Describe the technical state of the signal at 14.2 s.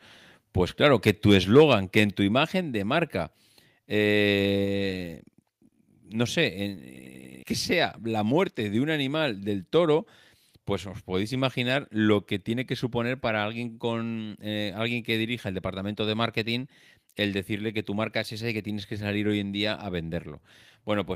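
At 14.2 s the speech signal is intact, with no technical fault present at that moment.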